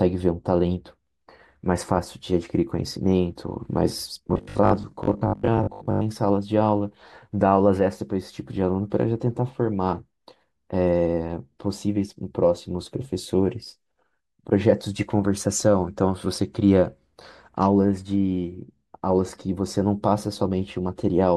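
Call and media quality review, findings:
Audio arriving too seldom, likely a starved playout buffer repeating its last 20 ms segment. Robotic sound from repeated short buffers, 4.27 to 6.03 s: about half the speech replaced by loops, imposing a rigid 50 Hz metallic buzz that only loosely follows the words.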